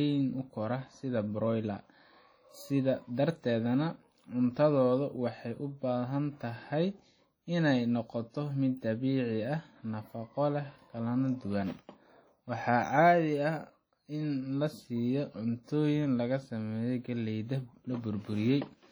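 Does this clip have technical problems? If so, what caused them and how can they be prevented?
Yes. Throughout the speech there is heavy WMA compression damage, likely from encoding at a low bitrate (the sound fits roughly 32 kbps). Long transform blocks spread quantisation noise across tens of milliseconds, so consonants ring and smear, and a washy hiss swells and fades with the speech as weak spectral lines drop out. Unlike a plain low-pass bandwidth cut, content still reaches about 20.1 kHz; the damage is in the smearing, not missing treble. To prevent it, encode at a higher bitrate or with a better speech-suited codec.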